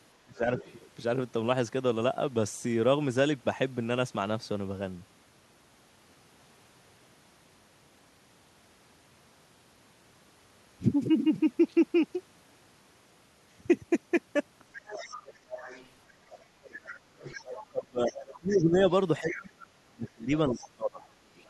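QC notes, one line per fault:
0.25–0.49 s, speech suppressed in double talk: the speech dips by up to about 25 dB over roughly a fifth of a second, likely because the echo canceller turned down the near talker along with the far-end echo while both sides spoke at once.
0.58–0.74 s, other side's voice leaking through: a brief scrap of a second voice sits about 20 dB under the speech, likely loudspeaker echo that the canceller left in the microphone signal.
14.73–15.89 s, other side's voice leaking through: a second voice is audible for just over a second, about 15 dB below the speech, likely uncancelled echo from the far end.
15.51–21.01 s, speech suppressed in double talk: the speech repeatedly drops by as much as about 25 dB, for around 3 s in total across this span, likely the canceller attenuating both talkers during overlapping speech.
16.89–21.50 s, other side's voice leaking through: residual far-end speech persists to the end of the clip at about 15 dB below the main voice, likely echo the canceller failed to remove.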